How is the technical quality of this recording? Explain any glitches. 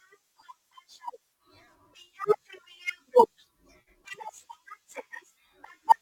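The recording has one fault running through the whole speech clip. Crude rate conversion throughout: samples were repeated rather than filtered, consistent with a 44.1 kHz to 48 kHz change, leaving a gritty, inharmonic fizz roughly 30 dB below the speech.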